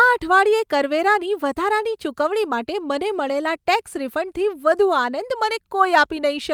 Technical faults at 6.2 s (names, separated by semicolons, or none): none